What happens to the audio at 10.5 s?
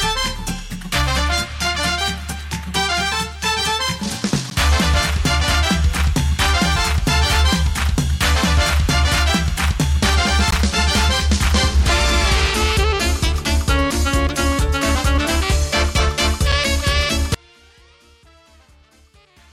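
A gap between stream segments occurs at 10.51 s. Two consecutive pieces of the stream carry time stamps that don't quite meet, so the player inserts silence to cover the missing stretch before the next segment begins. The result is a hole of about 17 ms with abrupt edges: the sound cuts off cleanly, then resumes where it left off. Nothing is skipped; the gap only adds time. The stream uses segments about 6 s long.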